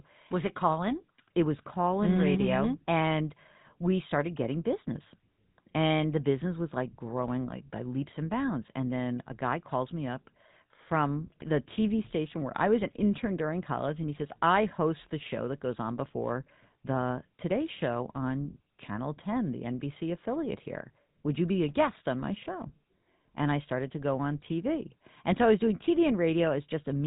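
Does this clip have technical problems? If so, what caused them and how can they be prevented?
Yes. Throughout the speech, the signal has passed through a GSM full-rate codec. It models the vocal tract with a filter and excites it with regularly spaced pulses, keeping only every third excitation sample, which fits a 13 kbit/s GSM full-rate coding. The result is plainly audible damage: a buzzy, gravelly roughness on the voice, and nothing above 3.8 kHz, so sibilants and airy detail are gone. To prevent this, capture or route the audio through a wideband or uncompressed path rather than a GSM full-rate phone link.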